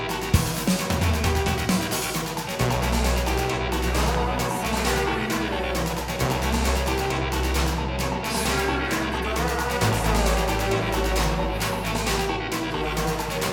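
A voltage spike, likely from a plug, switch or static, causes a loud pop: two quick pops from 4.15 to 4.40 s, about 15 dB above the sound, and a single pop at 12.12 to 12.14 s, about 10 dB above.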